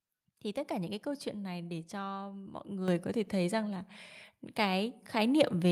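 At 2.88 s the microphone volume is stepped up. The level jumps by about 8 dB in a single step. The voice and the background noise both get louder at once, with no gradual rise. This points to the call software judging the input too quiet and raising the device's input volume. It acted on the source, so everything the microphone picks up is raised together, not just the speech.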